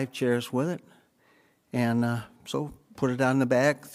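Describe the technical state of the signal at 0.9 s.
At 0.9 s the speech signal is intact, with no audible fault at that moment.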